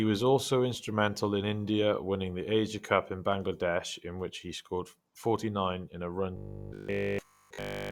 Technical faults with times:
6.37-7.91 robotic sound from repeated short buffers

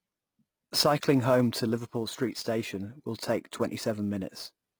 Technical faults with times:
0.00-4.80 HE-AAC compression
0.00-4.80 sample clock jitter

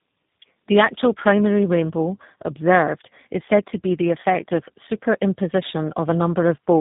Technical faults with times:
0.00-6.80 tandem speech coding

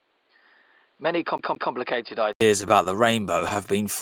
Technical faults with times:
0.00-2.41 input switched to a poorer device
1.38-1.72 CD stuck on one turn
2.62-3.66 repeated stalls (stutter)

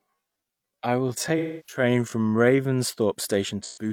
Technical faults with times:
0.00-2.80 time-stretched section
1.37-1.83 AAC frame loss with concealment
3.61-3.90 AAC frame loss with concealment

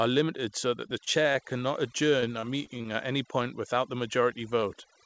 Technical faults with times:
0.00-5.05 overdone noise removal
0.70-1.36 repeated packet loss (robotic sound)
2.20-2.87 repeated packet loss (robotic sound)

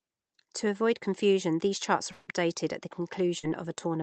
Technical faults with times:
2.11-2.30 long network dropout
3.39-3.46 short concealed packet loss

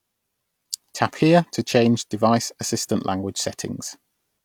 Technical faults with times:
none

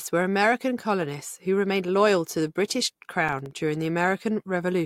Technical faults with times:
3.29-3.51 processor overload crackle

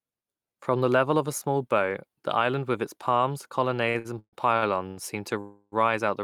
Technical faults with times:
3.89-4.98 repeated stalls (stutter)
5.40-5.74 call audio freeze

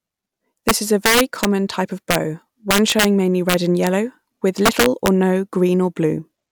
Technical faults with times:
0.69-1.45 integer overflow
2.11-2.15 integer overflow
2.71-3.05 integer overflow
3.49-3.87 integer overflow
4.66-5.08 integer overflow

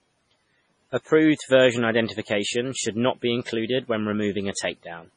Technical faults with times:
0.00-5.16 MP3 compression
4.54-4.57 pre-echo

